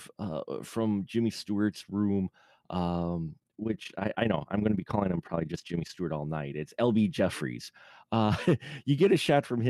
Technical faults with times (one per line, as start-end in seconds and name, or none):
3.40-6.02 overlap-add ripple